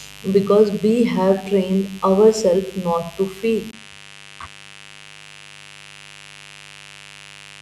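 From the first moment, a mains buzz runs under the speech: a steady, raspy tone from switching spikes on the 50 Hz supply, sitting roughly 25 dB below the voice. On a spectrogram it shows as evenly spaced horizontal lines at multiples of 50 Hz, climbing well into the kilohertz range.

At 3.71 s there is a 20 ms gap, and from there to the end the speech sounds duller, most likely because the input switched to a poorer device. Above that point the spectrogram is empty above 11.4 kHz. The waveform's level hardly changes, and a faint new noise floor appears well below the voice.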